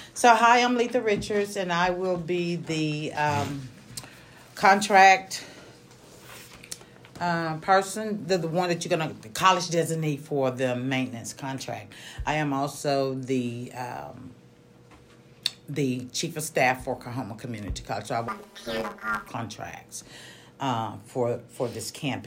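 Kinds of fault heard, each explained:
Planar audio read as interleaved: Each 10 ms block's channel halves play as alternating samples, giving a robotic 100 Hz buzz from 18.28 to 19.28 s.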